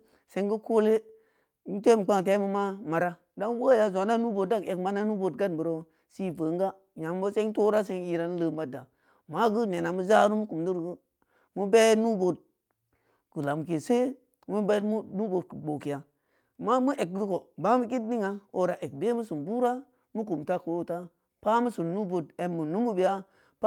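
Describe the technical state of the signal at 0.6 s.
At 0.6 s the speech signal is intact, with no audible technical fault at that moment.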